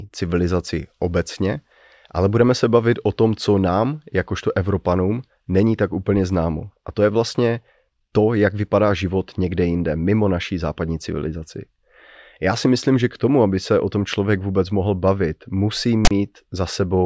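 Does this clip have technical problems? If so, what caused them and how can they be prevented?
Yes. At 16.05 to 16.11 s, just after "vůbec mohl bavit musí", the speech is cut by a hard-edged burst of lopsided rasp that drops to dead silence. This is file tags played as audio: a text tag block and its zero padding are decoded as sample data. To prevent it, use a decoder or parser that skips metadata blocks and never passes tag bytes to the audio stream.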